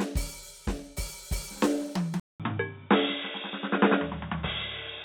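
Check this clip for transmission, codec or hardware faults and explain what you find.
One fault appears in the music. At 2.2 s the sound stops for 200 ms, then continues dull and boxy to the end, with nothing above 3.8 kHz, a new low hiss and a level shift. The likely cause is an input switched to a poorer device. A spectrogram shows the upper band abruptly cut, and the waveform shows the gap.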